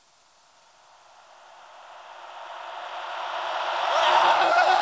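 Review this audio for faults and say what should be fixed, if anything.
Nothing here needs fixing: the sounds come across as they should over what's clearly a call link, with the top end stopping around 8 kHz as you'd expect from a wideband call codec like G.722.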